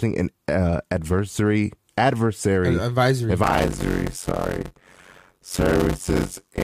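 A block size mismatch (padded) runs from 3.43 s, just after "adversary adversary uh advisory", to the end of this speech clip. One stage hands over shorter blocks than the next stage expects, and each block is topped up with silence, which fits 256-sample blocks being written. The repeated gaps produce a buzz at about 91.9 Hz, and the speech slows to 0.533 times its normal speed while keeping its timbre.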